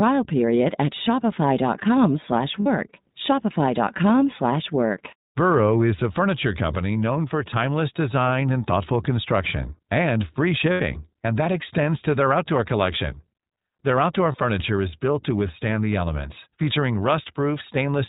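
iLBC codec, throughout: the speech is band-limited below 4 kHz and sounds plainly rough and synthetic, consistent with iLBC's 20 ms frame mode coding each frame's excitation independently.

Lost iLBC frames, at 2.60–2.67 s, 10.72–10.82 s and 14.32–14.36 s: the decoder repeats the last pitch cycle mixed with noise, giving brief buzzy held vowels lasting 60, 80 and 20 ms, each recovering almost immediately.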